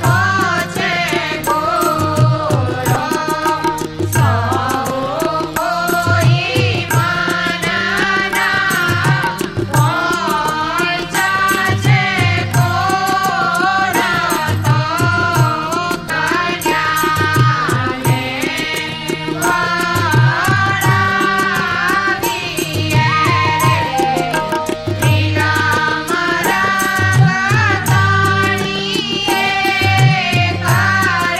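Damaged data in a compressed stream appears at 2.93–2.96 s, 5.54–5.57 s and 16.07–16.10 s. Each time, corrupted bytes make the decoder misread frames, lose sync and hunt for the next valid header, producing a brief chirp or blip lasting about 30 ms.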